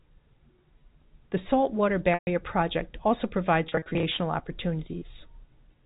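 Packet loss with pitch repetition at 2.14 to 2.27 s: a looped pitch period buzzes, then fades to silence. From 3.67 to 4.03 s, scattered short drops give brief buzzy holds.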